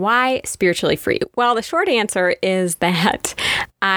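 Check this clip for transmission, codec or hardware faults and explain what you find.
No faults found; nothing in the speech needs flagging.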